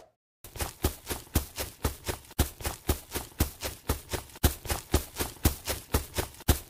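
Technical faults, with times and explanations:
No technical faults can be heard anywhere in the clip. There is nothing to time or explain.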